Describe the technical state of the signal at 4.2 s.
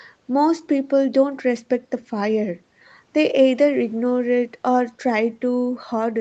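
At 4.2 s the speech is intact, with no fault at that moment, only the ordinary band limit near 8 kHz from the call path.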